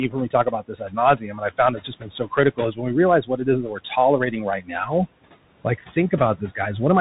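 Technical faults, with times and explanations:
Throughout: noise suppressor artifacts. Background sinks by about 18 dB in gaps and rises under speech; spectrogram shows noise floor pumping frame by frame.
Throughout: Bluetooth CVSD headset codec. One-bit delta coding at 64 kbps leaves granular hiss and scratchy sibilants; spectrogram shows nothing above 3.8 kHz, a hard ceiling.
0.08–0.98 s, 1.16–2.96 s, 3.22–3.91 s, 4.31–5.07 s: speech cut by the noise suppressor. Quiet speech mistaken for noise dips about 16 to 18 dB, sounding swallowed; waveform shows sudden envelope notches.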